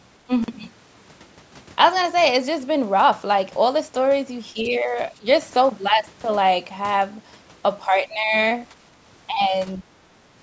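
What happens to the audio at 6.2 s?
A brief hole cuts the speech from 6.2 to 6.24 s: a block of digital silence, where 40 ms of the audio cut out abruptly, with no fade.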